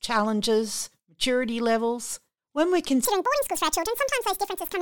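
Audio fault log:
3.05–4.81 s, section at the wrong speed: speech plays 1.86 times fast, about ten semitones higher, likely a clock mismatch; spectrogram harmonics jump upward, waveform compressed.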